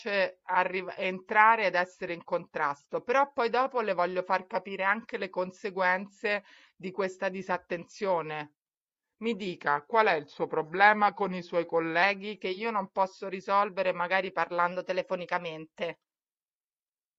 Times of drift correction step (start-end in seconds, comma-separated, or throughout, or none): 9.62-12.03, 14.72-16.28